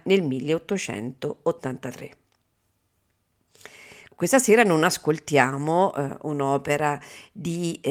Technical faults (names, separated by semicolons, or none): none